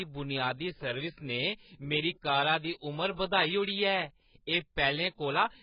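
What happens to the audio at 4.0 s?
At 4.0 s the speech is still carrying AAC compression that likely runs through the whole clip, and coarse quantisation at a rate that fits roughly 12 kbps leaves nothing above 5.1 kHz. The voice sounds dull and smeared, with a warbling, fizzy edge on sibilants.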